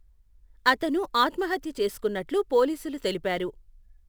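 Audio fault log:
throughout, sample clock jitter: a fine hiss and grainy roughness rides on the speech, thickening on loud passages and bright, sibilant sounds and disappearing in the pauses. The converter's clock wanders by a few microseconds, so each sample lands slightly early or late at random. Steep, fast-changing parts of the waveform turn that timing error into a larger amplitude error, which sits around 30 dB below the speech and follows its level and brightness.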